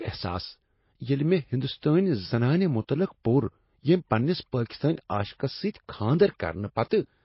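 From start to end the speech carries MP3 compression artefacts, likely from encoding at a very low bitrate, which fits something around 24 kbps. Nothing is present above 5.6 kHz, so sibilants lose their edge and the sound is dull and narrow. Weak frequency components switch on and off between frames as the encoder runs short of bits, giving a watery, swirly texture. Consonant attacks are smeared, and the damage is plainly audible throughout.

From 6.89 to 6.91 s there is pre-echo, a burst of noise about 21 ms long just ahead of a sharp onset. The codec spreads its quantisation error across the whole transform block, so the noise level that suits the loud attack also fills the quiet gap before it. The result is a brief hiss leading into the attack, which sounds softened rather than crisp.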